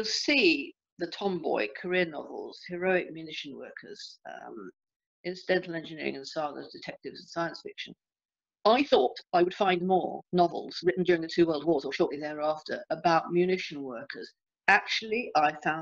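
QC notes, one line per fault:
8.66–12.18 s, time-stretched section: the sound suddenly runs about 1.69 times faster while its pitch stays put. It turns rushed. Software likely squeezed this stretch to fit a shorter length, dropping short pieces to hold the pitch.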